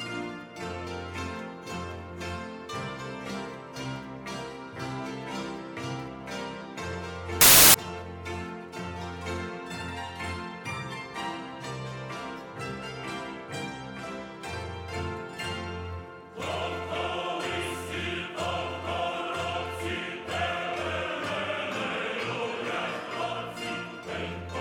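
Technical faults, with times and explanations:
7.41–7.74 s, samples built from the wrong bytes: for about a third of a second the sound turns into a blast of loud, harsh broadband noise. The bytes of each sample got stitched together wrongly, so the jittery low-order bits ended up acting as the big part of every value.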